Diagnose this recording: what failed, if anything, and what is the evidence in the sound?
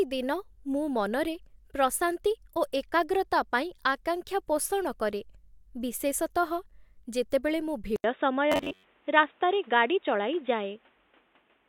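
At the capture stage, the input likely switched to a poorer device at 7.96 s. An 80 ms silence marks the change. After it, the band narrows, the tone turns dull or boxy, the level shifts by about 5 dB, and new background noise sits about 40 dB below the signal until the end.

At the driver or buffer stage, from 8.52 to 8.85 s, there is robotic sound from repeated short buffers. A rigid 93.8 Hz buzz sets in, which fits roughly 10.7 ms buffers likely being replayed when fresh audio arrived late. Repeats make up most of that stretch.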